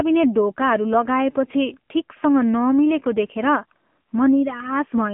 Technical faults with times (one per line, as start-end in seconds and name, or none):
0.00-5.13 AMR narrowband mobile codec